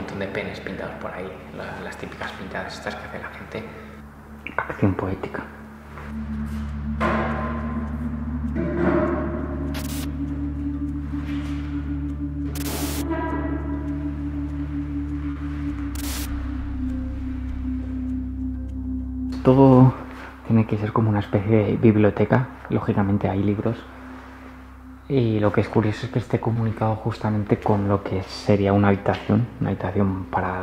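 Short concealed packet loss occurs twice, at 15.31 to 15.38 s and at 26.54 to 26.57 s. Each time, a piece of the stream arrived too late to decode: about 40 ms in the first case and 20 ms in the second. The receiver covered each gap by extending the preceding sound, then cross-faded back into the real signal. The result is a brief smear or wobble in the audio at each point.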